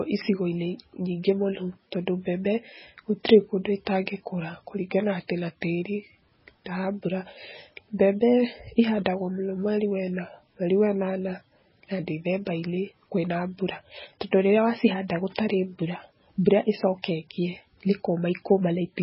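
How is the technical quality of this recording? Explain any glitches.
Technical quality is poor: the whole recording carries heavy codec damage, and there is one brief pre-echo.

Throughout the clip the speech sounds dull and watery, with nothing at all above 5.6 kHz and a swirling, warbling texture on sibilants. The likely cause is MP3 compression at a very low bitrate, the kind of damage that fits something near 16 kbps. Short of bits, the encoder cuts the treble at a fixed frequency and discards weak frequency lines, which then flicker on and off between frames. On a spectrogram this shows as a hard horizontal ceiling at 5.6 kHz and patchy, blocky holes below it.

At 5.28 s a pre-echo smears a sharp attack. The encoder spreads its quantisation noise evenly across each block, so noise sized for the loud onset also fills the quiet moment just before it. Here that produces a short hiss lasting about 19 ms, leading into a softened attack. 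On a waveform, low-level noise rises just ahead of the transient. On a spectrogram, a broadband smudge appears immediately before the onset.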